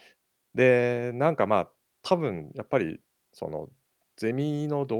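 Speech recording; no technical problems can be heard.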